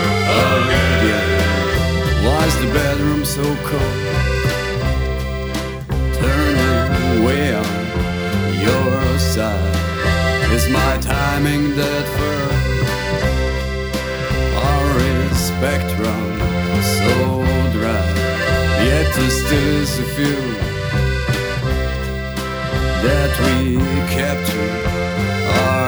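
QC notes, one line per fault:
No audible faults found.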